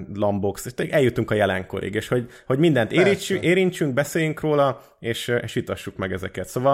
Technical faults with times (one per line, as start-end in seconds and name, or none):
none